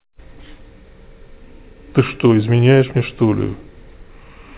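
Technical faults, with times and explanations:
No faults; the speech arrives over a call path with nothing above 4 kHz, which fits a G.711 mu-law telephone-band codec working as intended.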